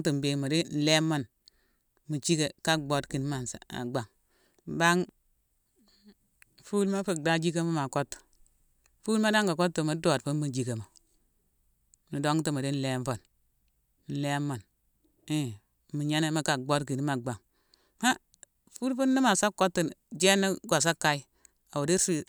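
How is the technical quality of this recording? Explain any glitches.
No glitches or technical faults can be heard anywhere in the speech recording.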